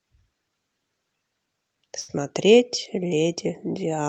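At 1.99 to 2.10 s, a burst of packet loss removes about 80 ms of speech. The receiver holds and fades the last sound for about 84 ms, then resumes further on. The call path's Opus coding limits the top end to about 8 kHz.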